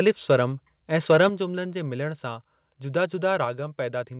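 From 0.07 to 0.36 s and again from 1.1 to 1.27 s, the loudest syllables take on a harsh crackle. This is likely microphone overload, with peaks driven about 2 dB and then about 4 dB past the converter's limit, so their tops are flattened. Unlike steady codec noise, the distortion appears only on those peaks. At 1.29 s, right after the second burst, and again at 3.45 s, voice and background drop together by about 7 dB and then about 4 dB. This is likely the microphone volume stepped down by the call software, and each drop is one abrupt step rather than a gradual fade.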